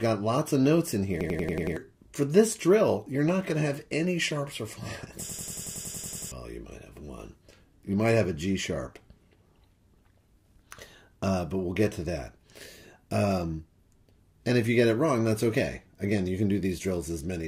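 A rapid machine-gun stutter cuts in from 1.21 to 1.77 s, then again, longer, from 5.29 to 6.32 s. A single fragment of about 93 ms repeats exactly at roughly 10.8 times per second, six times in the first burst and eleven in the second. This is a system hang loop: the computer or its driver stalled while the sound hardware kept replaying the same ring buffer, which fits a 4096-sample buffer. Around half a second of audio is lost at the first, and about a second at the second.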